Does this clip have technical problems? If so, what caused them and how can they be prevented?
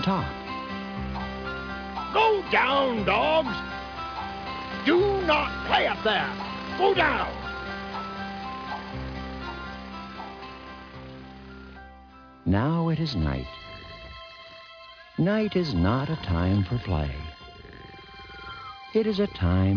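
No, there are no audible technical faults in this clip, so there is nothing to trace or prevent.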